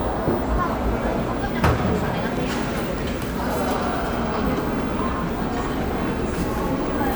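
No technical fault can be heard anywhere in the recording; the signal stays intact and continuous throughout.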